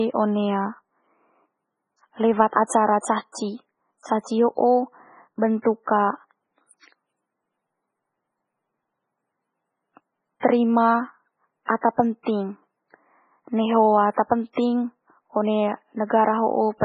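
From start to finish the speech carries heavy damage, most likely from MP3 compression. Nothing comes through above 10.4 kHz, so the top end just stops. Below that, the encoder has clearly been starved of bits, which fits a rate around 16 kbps. Quiet frequency detail keeps dropping in and out from frame to frame, giving a watery, swirly texture, with metallic chirps on the s sounds and smeared attacks.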